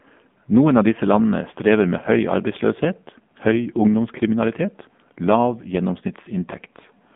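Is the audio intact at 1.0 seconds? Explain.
No, at 1.0 s, as throughout, the speech carries AMR narrowband mobile codec damage: band-limited to about 150 Hz–3.5 kHz, buzzy and synthetic, consistent with a 7.4 kbps mode.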